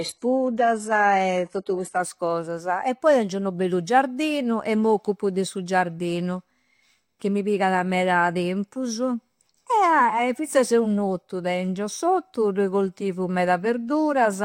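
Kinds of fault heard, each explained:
Adaptive stream starting at a low bitrate: until 2.0 s the speech sounds thin and swirly with nothing above 11.5 kHz, then quality jumps up with no gap. This fits a player opening on a low-bitrate HE-AAC version before switching to higher-bitrate AAC-LC.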